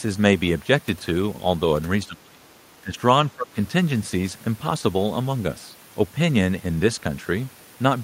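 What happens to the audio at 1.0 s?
Nothing goes wrong at 1.0 s: the speech runs through that moment intact, with no dropout, click, distortion or other fault.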